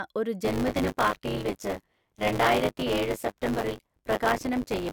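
This speech clip has buffer tearing from 0.44 s to the end. A 100 Hz robotic buzz appears. Roughly a third of each period replays audio about 20 ms old.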